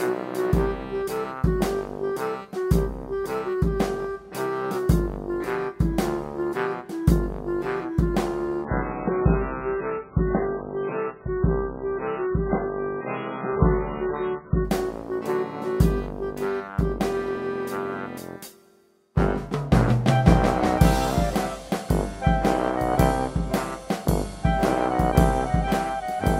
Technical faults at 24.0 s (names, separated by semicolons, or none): none